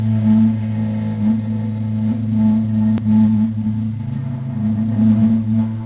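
At 2.98 s to 3.0 s there is a skip ahead in the everyday sound: about a second of audio is missing and nothing fills the gap. The receiver dropped that stretch while later audio was already queued, so playback jumps forward and the two sides meet almost directly.

From 3.08 s to 4.86 s a jitter buffer speed-up follows. With the buffer holding more audio than its target, the receiver repeatedly cut short pitch-period pieces, removing roughly 0.3 s in total. The sound runs at 117% speed, hurried but at unchanged pitch. The call path's band limit is audible throughout, with nothing above 4 kHz, which fits G.711 mu-law.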